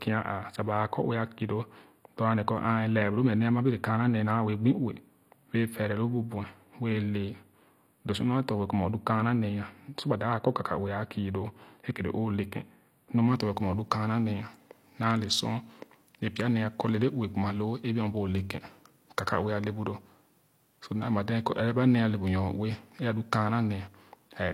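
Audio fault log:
throughout: low-bitrate audio saved at a high bitrate. The file is a high-bitrate MP3, but it was likely made from an earlier low-bitrate encode, perhaps something near 32 kbit/s HE-AAC. The second encoder could only preserve what reached it, so the top of the spectrum stays empty, with nothing above 16.2 kHz. The artefacts of the first encode carry through the speech, and the larger file adds no detail back.
0.00–13.28 s: channel delay (comb filtering). One channel arrives a few samples behind the other, which fits a delay of about four samples, well under a tenth of a millisecond. Once the two are summed to mono, the speech content shared by both partly cancels at regularly spaced frequencies, with the first notch around 7 kHz. That fixed gap in the upper range makes the speech sound hollow until the delay ends.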